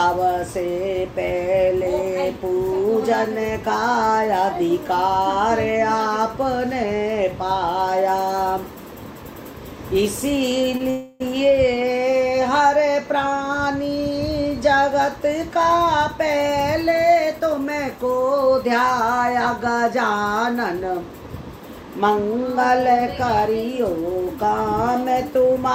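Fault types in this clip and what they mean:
Short stall from a late packet: From 10.77 to 10.81 s the sound is briefly held, with about 20 ms of stretched sound while the jitter buffer waited for one late packet. Nothing is lost. It is far shorter than the freeze just after and has no fading tail.
Call audio freeze: From 10.90 to 11.22 s the sound stops moving forward and the last moment is continued as a fading buzz or hiss for 300 ms, never reaching silence. It likely comes from packets held up in transit. Playback then resumes exactly where it stopped, so a gap is inserted with nothing skipped.
Jitter buffer speed-up: From 16.49 to 17.66 s the sound runs at about 107% speed while pitch stays unchanged, as roughly a tenth of a second is trimmed away in small pitch-period pieces to drain the surplus buffered audio. Unlike resampling, nothing rises in pitch. It just sounds hurried.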